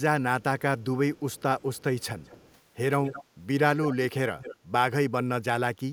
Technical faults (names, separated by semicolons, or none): echo leak